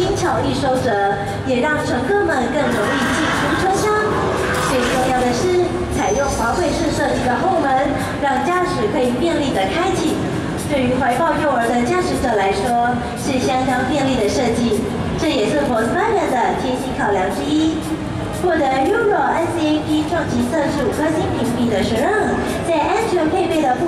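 Nothing stood out as a technical fault on listening.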